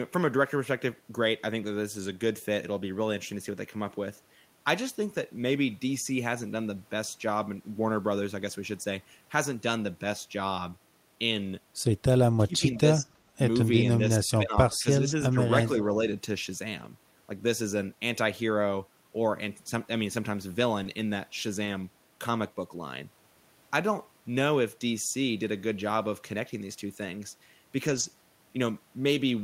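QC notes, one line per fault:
QC notes, one line per fault:
12.37–13.10 s, 13.32 s, 14.17–15.41 s, speech suppressed in double talk: both ends were talking together and the echo canceller, most likely unable to tell the near talker from loudspeaker echo, pulled the level down on everything. The speech dips by about 20 dB in the first stretch, about 25 dB in the brief one at 13.32 s and about 15 dB in the last, for roughly half a second, a moment, and about a second.
14.71–14.77 s, echo leak: the echo canceller probably let part of its microphone pickup through, so a faint copy of the speech returns 357 ms late, at about 30 dB below the direct signal. Because it lands inside the double-talk stretch and lasts only a few hundredths of a second, it comes across as a quiet scrap trailing the talker rather than a clear repeat.
16.79–16.85 s, 20.85 s, 21.65 s, 27.87–28.05 s, lost packet rebuilt from error correction: packets went missing, and the next packet's low-bitrate backup copy was decoded in their place, so nothing drops out. 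The patched segments, 40 ms, 20 ms, 20 ms and 100 ms long, sound rougher and grainier.
20.83 s, short concealed packet loss: about 20 ms of audio arrived too late to play, and the decoder bridged the hole by extending the preceding sound before crossfading back. It is heard as a tiny smear or wobble, overlapping the error-corrected packet at 20.85 s so the two roughen the same instant.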